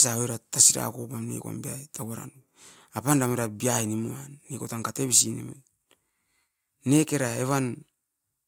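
No technical faults are audible anywhere in the speech.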